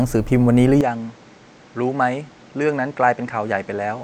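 At 0.81 s the speech abruptly turns duller and a few decibels quieter, with a new noise floor roughly 30 dB down, likely an input switched to a poorer device. A spectrogram shows everything above 8.3 kHz vanishing there, with no gap in the waveform.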